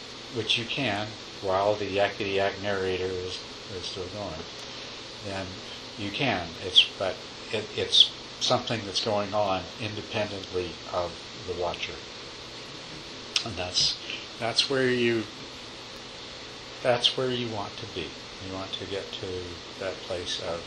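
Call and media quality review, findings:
Electrical switching spike at 15.96 s: sharp snap or tight cluster of clicks, around -25 dBFS, riding on top of the sound. Likely a nearby switch, relay or static discharge arcing into the audio line. Distinguishing note: a codec or buffer glitch would cut or replace the signal, whereas this is added energy with no dropout, and it is one isolated event rather than the steady repeating ticks of a clock or interference fault.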